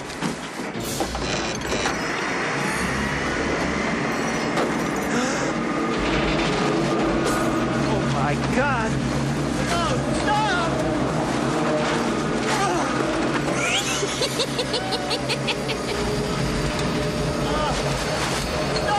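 At 1.31 s and again at 9.37 s there is a repeated buffer. New audio arrived late, so the same tiny slice played twice, which fits a 10 ms buffer. Each sounds like a brief click with a hard join, not a silent dropout, and almost nothing is lost.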